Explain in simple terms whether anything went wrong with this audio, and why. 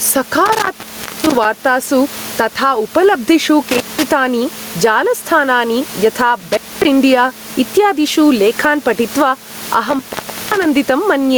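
Two things went wrong in this speech recording.

The first is gain pumping, and it runs through the whole clip. The level is pulled down whenever the speech gets loud, a large and audible swing. The speech itself sounds squashed, with loud and quiet parts pressed close together. The likely cause is a microphone level set far too high, with a fast limiter repeatedly pulling it back down on each loud moment.

The second is intermittent contact, which happens four times: 0.46 to 1.45 s, 3.69 to 4.06 s, 6.40 to 6.85 s, and 9.89 to 10.65 s. Each time the sound cuts out with a crackle at the start and end, leaving only faint hiss. The gaps last about half a second, 0.18 s, 0.24 s and half a second. That pattern points to a loose cable or plug briefly losing its connection. The quiet room noise underneath is simply part of the recording.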